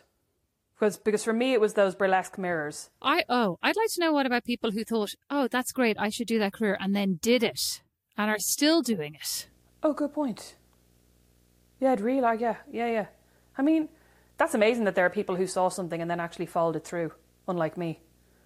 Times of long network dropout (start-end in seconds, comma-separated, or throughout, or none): none